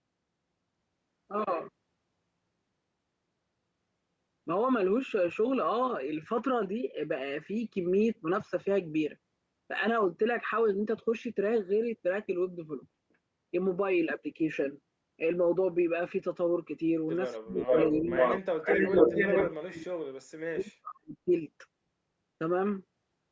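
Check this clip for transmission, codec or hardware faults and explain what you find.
Two related call faults cluster between 17.4 and 21.3 s, where both sides appear to talk at once.

Speech suppressed in double talk hits four stretches: 17.38 to 17.70 s, 17.89 to 18.13 s, 18.41 to 19.14 s and 19.48 to 21.31 s. The echo canceller likely could not tell the local talker from loudspeaker echo, so it turned everything down. The speech dips by about 35 to 40 dB in three places and only about 5 dB at 17.9 s, the last gap lasting well over a second. On a waveform these show as sudden hollows in the envelope. A spectrogram shows vertical dark bands where the harmonics vanish.

An echo leak runs from 17.58 to 18.40 s and again from 18.64 to 19.52 s. A delayed copy of the speech, trailing the original by 451 ms, comes back at about the same level as the direct sound. This is likely a loudspeaker echo that the far-end canceller failed to remove. 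On a spectrogram, a duplicate of the harmonic pattern appears shifted about 0.45 s to the right, overlapping the live speech and the suppression gaps.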